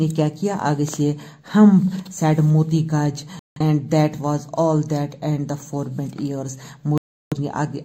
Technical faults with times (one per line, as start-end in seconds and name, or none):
3.39-3.61 digital broadcast dropout
6.98-7.37 digital broadcast dropout